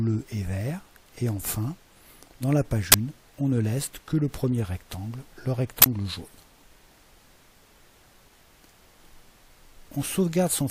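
An uninitialised buffer was played before audio was written into it, so leftover memory came out as short, loud bursts of digital noise at 2.92–2.94 s and 5.82–5.86 s.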